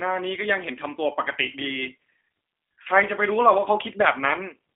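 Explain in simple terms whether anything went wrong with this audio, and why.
G.729 codec, throughout the clip: the whole recording has passed through this low-rate phone codec. Instead of sending the actual sound, it sends a compact recipe for rebuilding speech, so the voice comes out plainly rough, slightly synthetic and muffled, with nothing outside roughly 200 Hz to 3.5 kHz.

VoIP packet loss concealed by the speech codec, from 2.82 to 2.87 s: one packet, about 30 ms of audio, never arrived. The decoder filled the gap by stretching out the last sound it had, fading it away, which gives a brief buzzy or noisy smear that lingers a little after the audio resumes.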